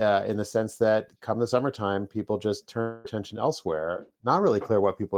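At 2.81 s, right after "the summertime people just", the sound smears into a fading buzz until 3.07 s, then resumes with about 240 ms skipped. This is likely a long network dropout, concealed by extending the last sound, with no silence.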